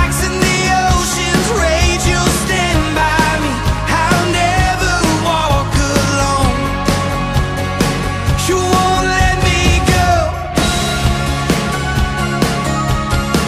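At 3.02 s the output buffer briefly ran dry, an underrun with held sample: with no fresh data arriving, the converter froze on its last value for about 0.73 ms, which fits a gap of roughly 32 samples. The waveform flattens at that held level rather than dropping to zero, so the sound halts almost silently. Essentially nothing was lost, and playback resumes exactly where it paused, leaving only a tiny, soft discontinuity.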